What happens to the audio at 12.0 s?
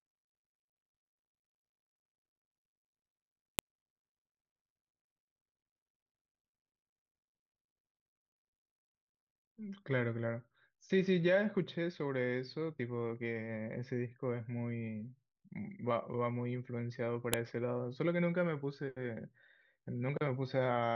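Nothing goes wrong at 12.0 s; the audio there plays through intact, with no dropout, click, distortion or other fault.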